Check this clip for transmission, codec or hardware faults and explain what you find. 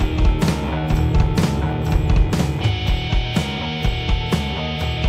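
One fault is present: a doubled audio track running from the very start of the clip until 2.68 s, where it cuts off abruptly. A second, full-band copy of the sound trails the original by about a second at roughly equal level, with no decay or room colouring, likely from the same signal being captured again through a slower path. On a spectrogram, each pattern reappears about a second later; the waveform shows overlapping, undamped repeats until the sudden stop at 2.68 s.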